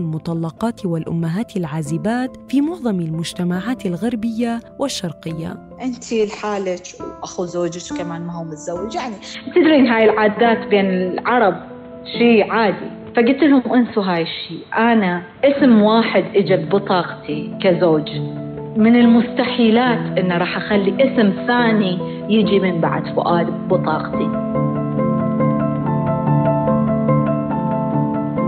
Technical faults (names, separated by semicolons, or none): input switched to a poorer device